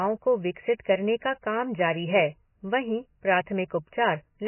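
MP3 compression damage runs through the whole speech clip from start to finish. There is nothing above 3 kHz, and the remaining band has a watery, swirling texture with smeared consonant attacks. This is likely heavy MP3 encoding at a very low rate, around 16 kbps. Starved of bits, the encoder cut the treble at a fixed point and dropped weaker frequency lines, and those lines flicker on and off from frame to frame.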